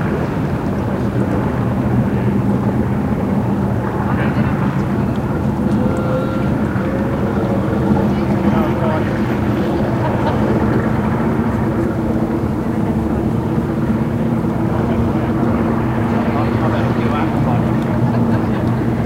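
A recording of everyday sounds, with no technical fault to be heard anywhere in the signal.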